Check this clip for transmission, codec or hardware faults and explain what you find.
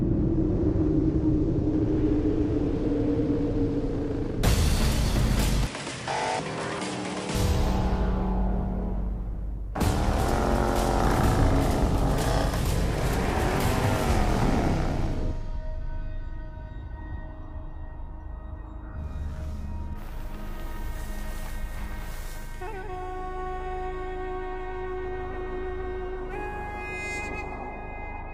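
One fault stands out, from 5.67 to 7.35 s. Over that stretch the sound drops about 10 dB in level, loses everything above 10.5 kHz, and carries a new background noise sitting about 50 dB below the signal, with no gap at either transition. This points to an input switched to a poorer device, likely a change to another microphone or a headset's call profile with its own narrower band, tone and noise, before the original input returns at 7.35 s.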